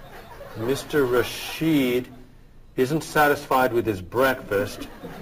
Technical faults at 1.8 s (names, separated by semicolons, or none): imaging from sample-and-hold upsampling